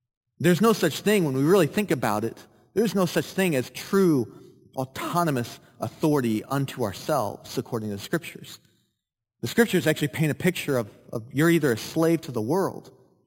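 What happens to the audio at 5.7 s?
At 5.7 s the speech carries imaging from sample-and-hold upsampling, present throughout. Each sample was repeated without smoothing, which fits an original rate near 11 kHz. Mirror copies fill about 5.5 to 11 kHz, roughly 19 dB down. They sound like a bright metallic fizz.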